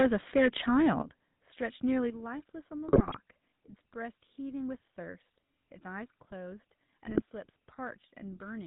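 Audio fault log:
Throughout: GSM full-rate codec. The speech has that plainly audible buzzy, gravelly roughness you get at 13 kbps, where the voice is rebuilt from a vocal-tract model fed by sparse regular pulses, and nothing much survives above 4 kHz, so it sounds narrow and rasping.
0.00–0.48 s and 0.76–0.90 s: microphone overload. The loudest stretches crackle and sound harsh, with peaks pushing about 8 dB and then about 4 dB past the converter's limit. The likely cause is input gain set too high, so the converter flattens the waveform tops.
1.02 s and 2.10 s: microphone volume stepped down. Both voice and background suddenly drop, by about 10 dB and then about 6 dB, the first right after the distorted opening. It likely comes from the call software spotting clipping and cutting the input level in steps.
2.88–3.19 s and 7.06–7.22 s: GSM bit errors. The voice breaks into squawks, pops and gargling for a moment. 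Corrupted bits reach the decoder, so filter, pitch or gain values come out wrong and warp the spectrum or level frame by frame. The first burst is longer, with a higher error rate.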